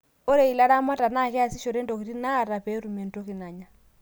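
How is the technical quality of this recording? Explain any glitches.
The speech recording holds a steady, continuous signal with no technical glitches to explain.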